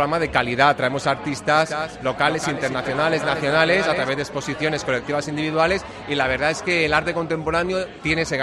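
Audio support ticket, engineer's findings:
Distinct repeat of the sound trailing the original, flat and dry, no room tail, starts and stops abruptly, 1.55–4.09 s. Doubled audio track: second copy mixed in roughly 200 ms late, about 10 dB down. Likely a slower parallel capture path or misaligned edit.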